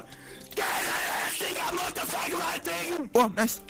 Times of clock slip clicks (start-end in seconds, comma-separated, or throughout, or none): none